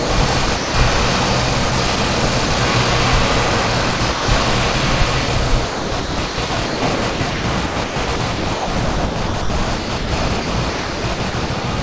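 Sound chopped by the voice detector, at 0.00–0.74, 1.70–2.50, 3.96–4.74 and 5.26–11.64 s: the sender likely gated quieter passages as silence and filled them with comfort noise, about 0.3 s, 80 ms, 0.22 s and 2.86 s respectively. The sound turns choppy. Nothing passes above 8 kHz, which fits a 64 kbps G.722 call path.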